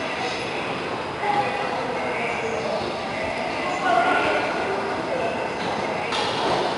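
A gritty hiss rides on every loud passage across the whole clip, with roughness on sharp attacks. This is 4-bit ADPCM compression: each sample is a coarse predicted step, so the noise tracks the level. Nothing sounds above about 10.7 kHz, which suggests a sample rate near 22 kHz.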